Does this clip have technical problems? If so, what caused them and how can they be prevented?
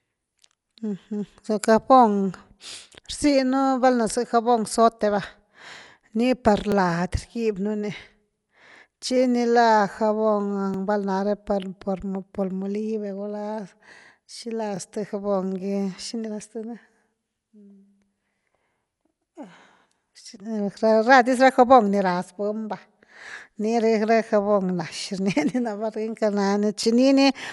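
Yes. The speech sounds dull throughout, with nothing above 11.5 kHz. That's likely Dolby Digital compression starved of bits, which fits roughly 64 kbps. Encode at a higher bitrate.

There are also overlapping chunks: a 23 ms piece repeats every 4 s, at 2.70, 6.72, 10.74, 14.77, 18.79, 22.81 and 26.83 s, giving little stutters. Trim the overlap when joining chunks.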